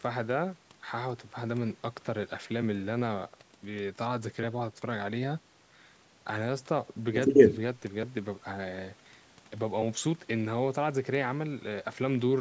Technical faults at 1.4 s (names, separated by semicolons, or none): none